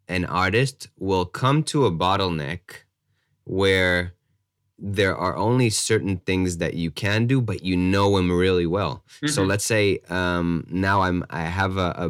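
Hard clipping runs throughout the speech: the signal was driven about 6 dB beyond what one stage of the chain could pass, so its peaks were cut flat instead of passing whole. Only a small fraction of the waveform, well under one percent, goes over the limit, so the damage sits on the loudest moments of the speech. There, the flattened tops add harmonics high in the spectrum, heard as crackle on the peaks.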